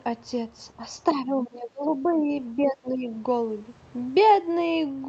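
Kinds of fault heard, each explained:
Speech suppressed in double talk: the speech drops deeply at 1.25–2.28 s and 2.56–3.11 s, likely an echo canceller turning it down while both sides talked.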